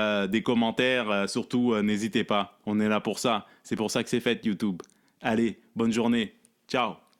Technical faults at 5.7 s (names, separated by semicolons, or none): none